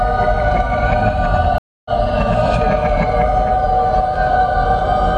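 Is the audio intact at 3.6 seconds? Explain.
No. At 3.6 s a faint high whistle near 2 kHz, somewhere between about 2.06 and 2.1 kHz, sits roughly 40 dB below the sound and runs through the whole clip. This is switching supply whistle: a switching power supply is cycling in an audible burst mode, or beating against another supply.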